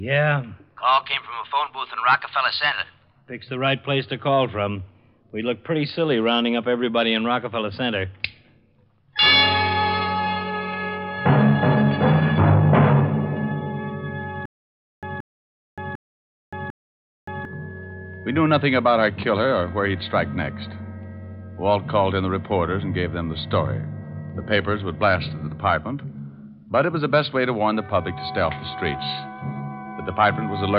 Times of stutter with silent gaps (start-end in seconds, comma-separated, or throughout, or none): 14.45-17.45